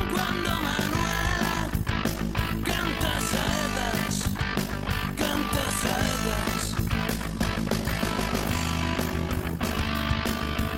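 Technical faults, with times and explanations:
Throughout, overlap-add ripple: the level pulses up and down by about 11 dB around 50 times a second, giving a rough tremolo over the whole sound. The audio was split into windowed frames and rejoined with an overlap whose windows do not add up to a steady gain, so each frame boundary leaves a dip. On the waveform the envelope shows a regular scalloped pattern. A spectrogram shows evenly spaced vertical striping at that frame rate.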